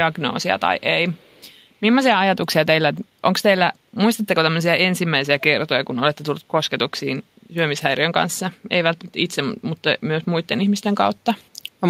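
Echo leak at 0.12 to 0.2 s and again at 1.12 to 1.51 s in this speech clip: a faint, delayed copy of the talker trails the original by about 218 ms, sitting very low, roughly 35 dB under the speech. The likely cause is a far end on loudspeaker whose echo canceller failed to fully remove what its microphone picked up, so those residual scraps were sent back down the line.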